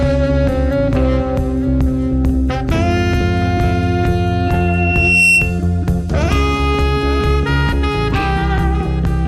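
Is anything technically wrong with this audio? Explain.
Yes. From 4.46 to 5.61 s there is loudspeaker feedback squeal. A microphone is picking up the loudspeaker it feeds, and around 2.7 kHz the loop's gain has risen above one, so that frequency keeps reinforcing itself on every pass. In the sound, a thin tone at 2.7 kHz swells out of the music over roughly three-quarters of a second and peaks about 5 dB above it, until the squeal stops at 5.61 s.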